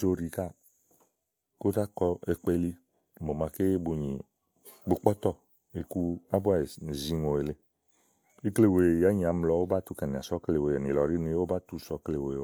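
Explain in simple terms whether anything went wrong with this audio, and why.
Nothing went wrong; the recording has no faults.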